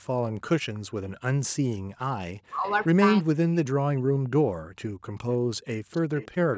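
Speech recorded through a call path, with three kinds of fault. Echo leak appears as a faint delayed copy of the far talker trailing about 0.33 s behind, at 0.74–0.91 s, 2.65–2.86 s, 5.31–5.35 s and from 5.92 s to the end, where it grows much louder. The fixed delay marks it as a returned signal rather than room reverberation, likely from a loudspeaker the echo canceller did not fully cancel. Speech suppressed in double talk cuts the near talker steeply in pieces at 2.38–3.42 s, 4.12–4.65 s and 5.85–5.89 s. The canceller likely mistook the talker for echo while both sides spoke. Unlike a network dropout, the losses line up with overlapping talk. Background gated by the echo canceller briefly pulls the room sound down by about 40 dB between 4.93 and 5.49 s while the loudspeaker plays. It affects the ambience rather than the talker, which separates it from double-talk suppression.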